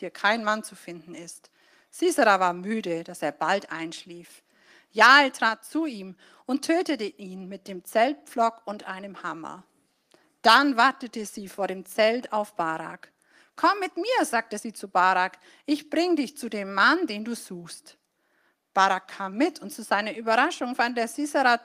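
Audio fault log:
5.01–5.17 s, microphone overload: just after "dass er bald einschlief", the loudest peaks turn harsh and crackly, likely from input driven about 3 dB past the converter's limit, flattening a small share of samples.
5.49 s, microphone volume stepped down: the sound and background drop together by about 4 dB in one step just before "zu ihm und tötete", likely automatic gain control reacting to the distorted peak.
9.57 s, microphone volume stepped up: right after "und einem", the sound and background jump up together by about 3 dB, as the call software raised the microphone's input volume in a single step.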